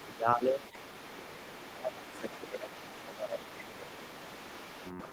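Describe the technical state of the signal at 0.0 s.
Speech suppressed in double talk runs from 0.0 to 0.65 s. The talker's level dips by around 15 dB for roughly half a second in total, likely because the echo canceller, hearing both sides at once, could not tell the talker from loudspeaker echo and attenuated everything.

The other side's voice is leaking through from 0.0 to 1.18 s, sitting about 20 dB below the talker as a faint second voice. This is likely residual loudspeaker echo that the canceller failed to remove from the microphone signal.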